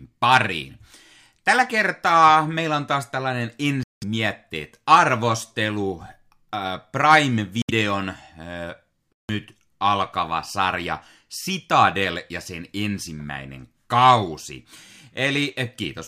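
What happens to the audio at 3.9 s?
The speech cuts to silence from 3.83 s to 4.04 s, a hole of about 0.2 s with abrupt or briefly faded edges, and the likely cause is a Bluetooth dropout: packets reached the headphones too late and were discarded. What identifies it is the resumption. The speech returns as though it had kept playing through the gap, so that stretch is simply lost, whereas a stall would pause and then pick up exactly where it stopped.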